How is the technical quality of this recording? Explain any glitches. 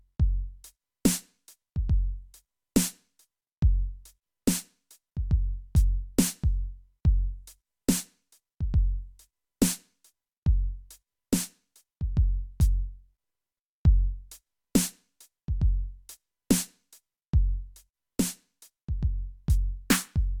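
No glitches to explain: the music runs without a single audible technical fault.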